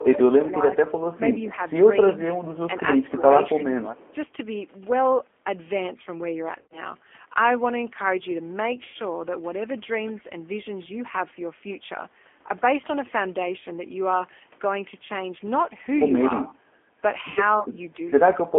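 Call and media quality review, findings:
G.729 codec, whole clip: speech band-limited to about 250 Hz to 3.4 kHz, with a rough, synthetic edge that is plainly audible. The sound fits an 8 kbit/s G.729 path. Unlike a plain narrowband line, the coarse pulse excitation adds the roughness.

Speech suppressed in double talk, 0.0 to 0.69 s: level dips of up to about 10 dB, affecting roughly 0.4 s in total. Likely the echo canceller ducking near-end speech over far-end playback. Unlike packet loss, there are no repeats.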